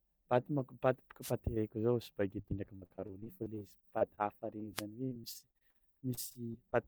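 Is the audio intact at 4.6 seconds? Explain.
No. At 4.60 to 4.63 s there is a short concealed packet loss. About 20 ms of the speech stream never reached the decoder in time, so the receiver covered the gap by extending the preceding sound for roughly 10 ms and then blending back into the real signal. What results is a brief smear or wobble at 4.6 s, a small patch of sound that doesn't quite belong, rather than a clean break in the audio.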